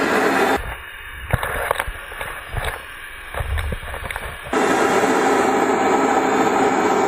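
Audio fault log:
Nothing stood out on listening to this audio.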